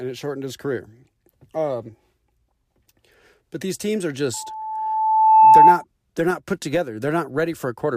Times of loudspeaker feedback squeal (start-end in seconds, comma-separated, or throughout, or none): 4.33-5.84